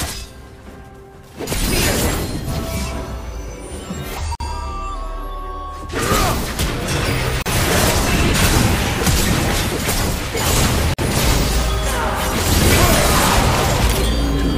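At 4.35 s, 7.42 s and 10.94 s the sound drops out for about 50, 37 and 48 ms, each a gap at a join of encoded pieces. Separately encoded sections were joined with their encoder delay and end padding left in, leaving short silences with smeared edges before the sound resumes where it stopped.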